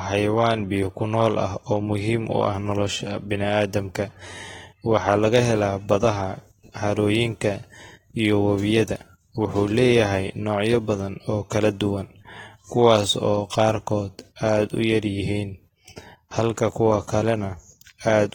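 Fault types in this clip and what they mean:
AAC compression: Present throughout the speech. The coding damage is plainly audible and is likely from AAC-LC, which splits the signal into frequency lines frame by frame and quantises them coarsely against a hearing model, discarding what it judges masked. Content stops above 19.4 kHz, the band-limit the encoder imposed. The degree of damage points to a low bitrate, roughly 28 kbps, where too few bits remain to code detail cleanly.
pre-echo: At 11.50 s and again at 14.36 s, a brief hiss about 15 ms long precedes a sharp attack. A transform codec spreads its quantisation error across an entire block, so when a sudden onset sits late in that block, noise sized for the loud attack also fills the quiet moment before it. The smear runs ahead of each attack, blunting its edge.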